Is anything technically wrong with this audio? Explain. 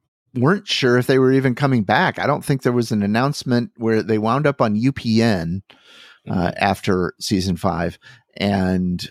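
No, nothing technically wrong can be heard in this speech recording. In the pauses the background fades down to silence and comes back in time for the next sound, so nothing spoken is lost.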